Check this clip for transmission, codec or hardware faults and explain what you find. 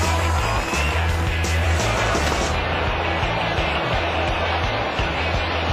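Nothing stood out on listening to this clip.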